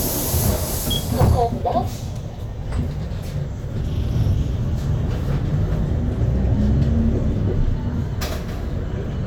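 A recording of everyday sounds, with a stretch of hard clipping from 1.21 s to 1.77 s. Over that half second the level arrives at roughly 7 dB above what the signal chain can pass, so the waveform peaks are sheared off flat rather than reproduced. Those squared tops generate harmonics high in the spectrum, and the result is distortion on the loud peaks in that span.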